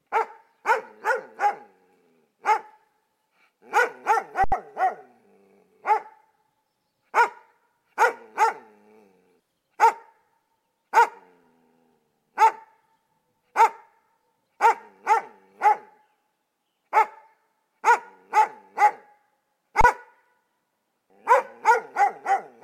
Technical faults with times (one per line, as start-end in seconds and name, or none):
4.44-4.52 underrun with held sample
19.81-19.84 underrun with held sample